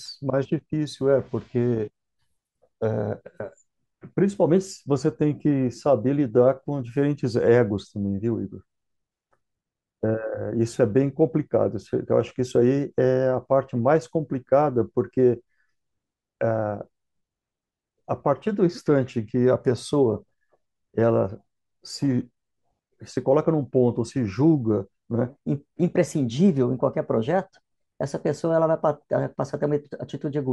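A likely clock mismatch plays the section from 25.30 s onward at the wrong speed, 1.15 times fast; the speech rushes and rises about two semitones.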